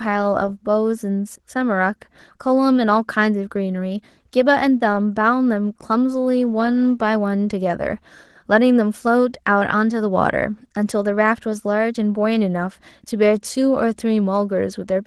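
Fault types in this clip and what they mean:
Opus voice compression: Throughout the speech the codec splits the sound into a linear-prediction layer below 8 kHz and a transform layer above it. The band stays full width, which sets it apart from a narrowband phone-line sound, but the coarse excitation makes the voice plainly hoarse and slightly robotic. The steady degradation suggests a rate around 16 kbps and fits 20 ms frames.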